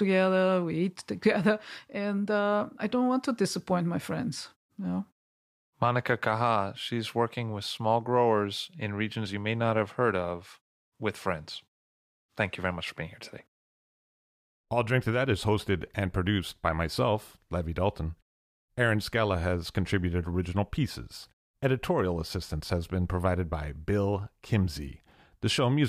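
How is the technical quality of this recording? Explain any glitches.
No glitches can be heard in this speech recording. In the pauses the output fades to silence and the background drops away, then returns in time for the next sound without clipping the start of any speech.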